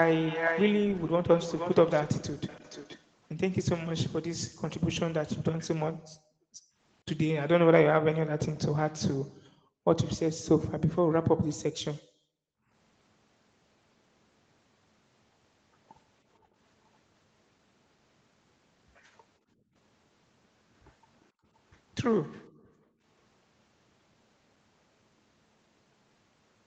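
From 0.19 to 3.03 s a second copy of the speech trails the original by about 0.47 s at about 5 dB below it. This is an echo leak, likely from a far-end echo canceller missing its loudspeaker signal. It is a distinct repeat, not a smeared reverberant tail. The background is then gated by the echo canceller at 4.49 to 6.78 s, 9.21 to 12.7 s, 16.39 to 16.55 s, 19.39 to 19.75 s and 21.32 to 23.02 s. The room sound ducks by about 40 dB at its deepest, and by about 20 and 23 dB in the two short dips. That sets it apart from a network dropout. The whole signal sits within 8 kHz after the call path.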